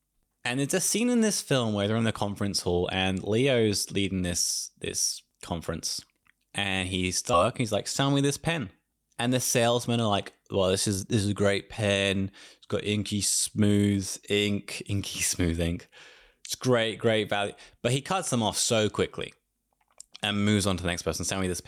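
At 7.33 to 7.35 s there's a skip ahead: roughly a second of the speech just isn't there. It looks like the audio was dropped, either in transit or by the jitter buffer when it overflowed, while later audio was already queued up. Nothing fills the hole, so playback jumps straight from one side of the cut to the other, and the join is abrupt with essentially no gap.

Right after that, the jitter buffer speed-up kicks in, twice. From 7.63 to 8.24 s the speech runs at about 107% speed, shaving off something like 50 ms. Then from 8.64 to 10.57 s it runs at about 105%, trimming roughly a tenth of a second. The buffer was holding more audio than its target, so the receiver kept snipping out short pitch-period-sized pieces to bring the delay back down. The pitch stays put, but the talking sounds slightly rushed through those stretches.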